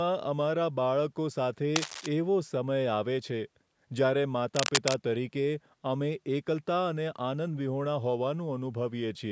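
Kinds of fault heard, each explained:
Cable scratch noise: at 1.76 to 2.06 s and 4.55 to 4.94 s, dense, uneven scratching bursts about 5 dB below the speech and then level with it, likely from a worn cable or connector being moved.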